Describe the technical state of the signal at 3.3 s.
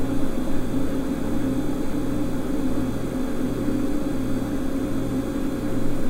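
At 3.3 s the sound is intact, with no dropout, clipping, glitch or other fault.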